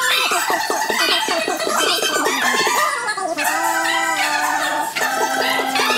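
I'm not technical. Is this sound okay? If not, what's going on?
No. From start to finish, everything runs three times too fast and sits far too high, about an octave and a half above where it should be. This is a wrong sample rate: the audio is played back faster than it was recorded, likely audio made at 16 kHz being played at 48 kHz.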